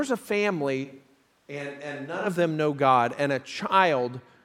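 A speech recording that, from 0.86 to 2.25 s, turns suddenly roomy and hollow, thinner in the bass and about 10 dB quieter, with room noise rising to about 30 dB below the speech, likely a switch to a distant microphone. The waveform steps down abruptly at both edges, and the spectrogram shows weaker low frequencies and a raised noise floor between the words.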